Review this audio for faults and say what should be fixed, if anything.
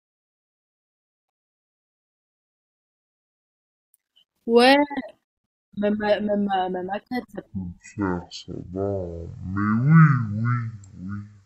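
Stereo read as mono from 7.46 s to the end at 11.46 s: the speech abruptly drops to half speed and falls a full octave, 12 semitones lower. Left and right samples that belong side by side in a stereo frame are being read one after another as a single channel, so each moment takes twice as long to play. That interleaving also leaves a fainter mirrored copy of the speech in the upper half of the spectrum. To prevent it, make the reader use the file's actual channel count and deinterleave stereo frames, or downmix them properly, before treating the stream as mono.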